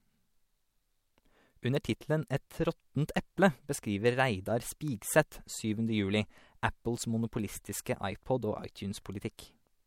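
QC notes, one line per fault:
7.85 s and 9.37 s, pre-echo: short hiss about 13 to 14 ms before each sharp attack, rising about 11 and 14 dB, with softened onsets. This points to long transform blocks whose noise spreads ahead of each transient.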